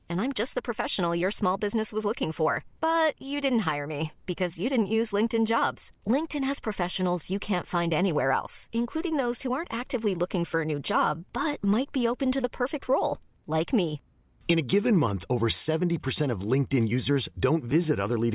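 No technical faults occur at any point in the recording, so there is nothing to describe in time order.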